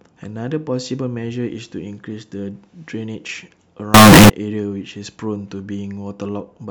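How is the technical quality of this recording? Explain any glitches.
There's one clear glitch in this speech recording, a short burst of float read as integer between 3.94 and 4.30 s. For those third of a second the sound jumps to a harsh, blaring, almost square-edged buzz at an almost fixed, high level, with the background noise suddenly as loud as the talking, though you can still follow the pitch. It's likely 32-bit float samples being decoded as 32-bit integers, so the sign and exponent bits end up setting the level.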